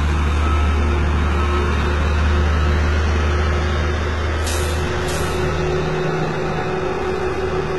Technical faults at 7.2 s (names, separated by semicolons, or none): HE-AAC compression; doubled audio track